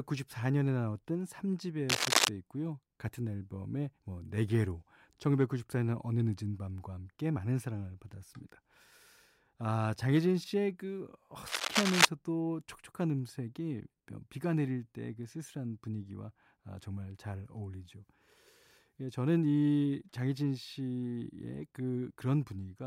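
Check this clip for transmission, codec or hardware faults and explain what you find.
Two short bursts of cable scratch noise break into the speech, one from 1.89 to 2.29 s and another from 11.47 to 12.05 s. Each is a dense, ragged rustle that sits a few decibels above the speech. It most likely comes from a worn cable or connector being moved, its contact resistance fluctuating rapidly. Unlike isolated digital clicks or dropouts, the disturbance is a sustained, irregular scratching lasting a few hundred milliseconds, with no gap in the speech.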